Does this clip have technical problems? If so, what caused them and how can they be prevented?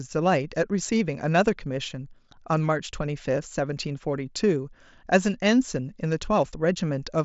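No, this clip has no technical problems, so there is nothing to trace or prevent.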